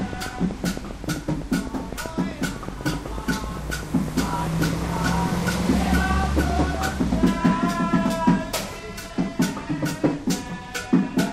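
A train of clicks runs from 0.01 to 7.28 s: about fifty regular pulses at 7.85 per second, roughly 10 dB above the sound, likely from electrical interference.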